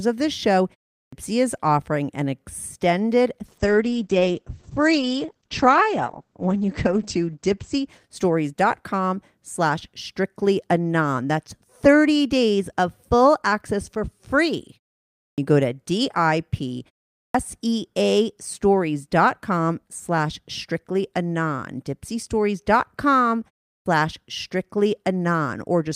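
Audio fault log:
1.02 s, 15.27 s, 17.23 s and 23.76 s: clipped start after a pause. Each time the sound resumes after a short gap of roughly a third to half a second, the first 100 to 115 ms goes missing, so the onset jumps in abruptly with its opening sounds shaved off. The output device seems to drop into a sleep state during the silence and doesn't wake or relock fast enough to catch the start of what follows.
3.46 to 9.19 s: call bitrate drop. The stream falls from 40 kbps to just 9 kbps and stays at the bottom for about 3.7 s. With so few bits, Opus codes everything much more coarsely, so the audio gets rough and watery. It also narrows the bandwidth from 20 kHz to 8 kHz, so the top end disappears and it sounds muffled until the bitrate climbs back. This points to a sharp drop in the call's bandwidth estimate.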